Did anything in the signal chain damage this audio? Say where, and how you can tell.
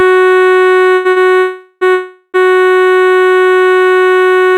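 Yes. The damage happened at the network stage, where packets arrived late and the jitter buffer stalled. Short stalls from a late packet hold the music at 0.95–1.07 s for 95 ms and at 1.11–1.18 s for 51 ms. In each stall the buffer ran dry and the last sound was stretched. On a spectrogram this shows as frozen horizontal bands, and the music then carries on with nothing skipped.

Two longer call audio freezes hang the music from 1.38 to 1.83 s (about 430 ms) and from 1.93 to 2.36 s (about 410 ms). The last sound turns into a buzz that fades, reaching silence for about 10 ms and 40 ms. The waveform shows a decaying smear, and the likely cause is packets held up in the network.

A jitter buffer slow-down at 2.90–3.10 s drags the music to about 78% speed without changing its pitch, adding 54 ms. The receiver was repeating single pitch periods to rebuild its reserve, which shows on a waveform as identical cycles lined up in a row.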